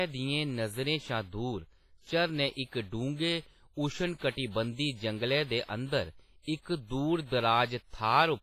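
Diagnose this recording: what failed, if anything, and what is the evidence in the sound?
The codec stage failed. Throughout the speech there is a ringing, washy quality with a hiss that rises and falls with the signal, and nothing above 15.5 kHz. That points to heavy transform coding, likely WMA compression at a low bitrate around 24 kbps.

Pre-echo from the same codec appears before four attacks: at 2.52 s, after "शा दूर झरने" and before "इक डुंगे"; at 4.17 s; at 5.64 s, after "जंगलै दे"; and at 6.42 s. Each is a hiss lasting 44, 47, 43 and 57 ms. The block's quantisation noise fills the quiet gap before each onset.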